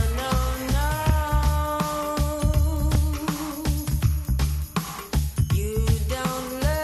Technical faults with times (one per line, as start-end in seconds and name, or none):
none